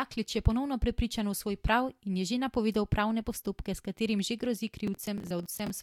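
Near the end, from 4.87 to 5.7 s, the speech picks up processor overload crackle. The system kept missing its deadlines for short buffers of around 10 ms, and each miss repeated a sliver of old audio with hard edges. About twenty of those come through as a gritty, tearing crackle over the voice.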